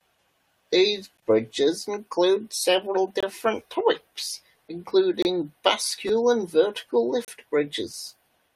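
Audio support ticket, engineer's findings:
Gap between stream segments, 1.17 s, 3.20–3.23 s, 5.22–5.25 s, 7.25–7.28 s. Hard-edged silent holes of 11, 23, 26 and 32 ms, right after "bridges include several" and after "and vertical". Spaced about 2 s apart, pointing to segment boundaries in the streaming/packaging stage. Timestamps between consecutive segments don't line up, and the player pads the hole with silence. Nothing is dropped, but the holes grow longer across the clip.

Repeated buffer, 3.80 s and 6.08 s. Brief click-like stutter at 3.80 s, one extra play. At 6.08 s, just before "and vertical", a short buzz from three extra plays. Repeat length fits a 256-sample buffer (about 5 ms). Output device underrun: new audio arrived late, so the last buffer played again. Roughly 5 ms and 15 ms of audio lost.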